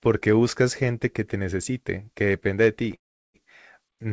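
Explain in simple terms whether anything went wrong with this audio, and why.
A call audio freeze interrupts the speech from 2.95 to 3.36 s. For about 0.4 s the sound stops and is almost entirely silent, then the speech carries on exactly where it left off, with nothing skipped. The likely cause is that the audio data was held up on its way through the call, so the receiving end ran out of sound to play and had to wait. That pause shifts everything after it slightly later. The call system also trims away sound above 8 kHz.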